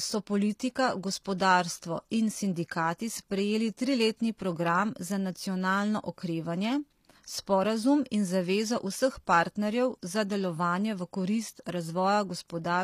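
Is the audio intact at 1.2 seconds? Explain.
No. At 1.24 s, just after "so politika", there is pre-echo: a short hiss spread over about 15 ms that arrives before a sharp attack rather than after it. The codec spreads quantisation noise across its whole transform block, so noise sized for the loud onset leaks into the quiet gap ahead of it, and the attack itself sounds softened. Because the noise comes before the onset, this is not a reverb tail, which follows the sound it belongs to.

Around that moment, and throughout the clip, the treble has a gritty, metallic edge, with lispy s sounds. This is HE-AAC compression, and the plainly audible damage fits a low bitrate near 24 kbps. The highs are likely rebuilt by spectral band replication, which copies lower bands upward so that the harmonics no longer line up. Unlike a plain low-pass, the top end stays bright, but it sounds synthetic rather than dull.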